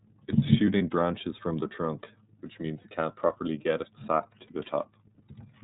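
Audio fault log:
Throughout: iLBC codec. The speech is band-limited, with nothing above 4 kHz, and has a plainly audible rough, slightly synthetic texture. The codec models each frame's excitation on its own, with no reference to the frame before it, so fine detail in the voice is coarsened rather than smeared over time. The character points to the 30 ms frame mode, which fits a rate of about 13.3 kbps. It sounds like narrowband VoIP coding.
0.78 s, 2.82 s, 4.47 s: lost iLBC frames. Each event is a single dropped frame of about 30 ms. The decoder fills each gap by repeating the last pitch cycle blended with noise, so each gap sounds like a brief held, faintly buzzy or breathy vowel instead of silence. Each iLBC frame decodes independently, so the next frame that arrives restores the voice almost immediately, and no error carries over past these short gaps.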